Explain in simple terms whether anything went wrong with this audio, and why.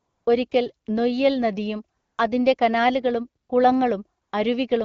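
Something did go wrong: the pauses were filled with AMR comfort noise. The phone decided nobody was talking and stopped sending the real sound. The far end then made up a smooth, steady hiss to fill the gap. You can hear it swap in at 0.00 to 0.25 s, briefly at 0.49 s just before "നൊയ്യൽ നദിയും", at 1.97 to 2.17 s right after "നൊയ്യൽ നദിയും", at 3.43 to 3.49 s, and at 4.21 to 4.31 s. The speech itself comes through the HD Voice codec clearly.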